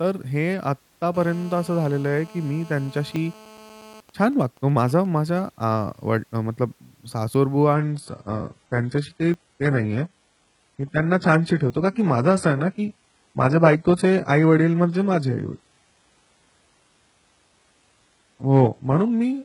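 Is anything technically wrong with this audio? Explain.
Yes. The recording has four kinds of technical fault.

GSM phone buzz runs from 1.1 to 4.0 s. A 2G phone was near the recording gear during a call. It transmits in radio bursts 217 times a second. The audio circuit rectifies those pulses into sound. The result is a hard, raspy 217 Hz buzz with many harmonics. It sits about 24 dB below the speech. It stays steady throughout and has nothing to do with the talking.

GSM signalling bursts follow from 4.1 to 5.4 s. The same phone's user has gone quiet in the call. The phone then sends only short groups of bursts. The rectified result is even ticks with a longer 217 Hz buzz twice a second. It is well below the speech level. It replaces the continuous buzz heard before it.

Dropped buffers (overruns) occur at 3.16, 7.34, 9.34 and 11.7 s. Each is a small jump forward in the speech. No silence is heard. 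Around 20 ms of sound is missing each time, and the edges are butted together. The likely cause is that the software failed to collect its samples before the hardware overwrote them.

Adaptive stream at a lower bitrate begins at 7.7 s and lasts to the end. The connection slowed, and the player switched to a leaner version of the stream. The change is sudden, with no gap. Codec artefacts rise. This points to a drop from around 96 kbit/s AAC to a very low-rate HE-AAC stream near 12 kbit/s.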